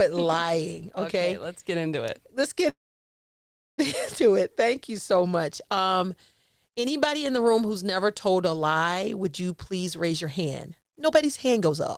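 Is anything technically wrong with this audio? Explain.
Yes, there are two faults. A call audio freeze runs from 2.69 to 3.80 s. Packets were likely held up and the buffer ran dry. The sound trails off into about a second of silence, then resumes with nothing lost. A jitter buffer speed-up follows "a lie would you", from 9.72 to 11.71 s. Pitch-period slices are trimmed repeatedly, about half a second in total. The speech runs at 125% speed, same pitch, sounding hurried.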